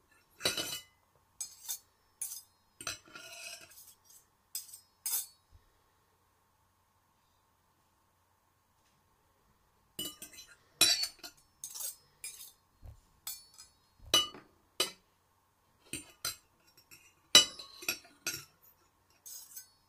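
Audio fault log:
1.74 s and 3.90–3.93 s, compressed frames skipped: at each point about 20 ms of audio never plays because compressed frames are missing or were rejected by the decoder, so the sound jumps forward by that much. Nothing is repeated, which separates it from a stutter or buffer repeat.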